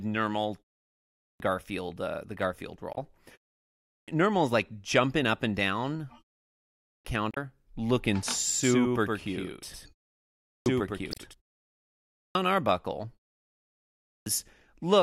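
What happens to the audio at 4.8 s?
Nothing goes wrong at 4.8 s: the speech carries on intact through that moment, with no dropout, click or distortion to be heard.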